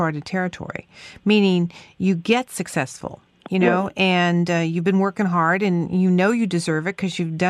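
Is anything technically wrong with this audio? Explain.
No technical faults are audible.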